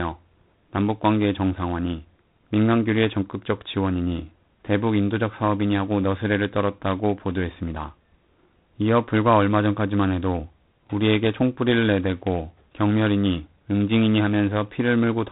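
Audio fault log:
Throughout, G.726 ADPCM: the speech passes through a coarse adaptive-difference telephone codec, which fits the 24 kbit/s mode, with too few bits per sample to follow the waveform, so a harsh, rasping hiss rises and falls with the voice, and nothing above 3.9 kHz survives.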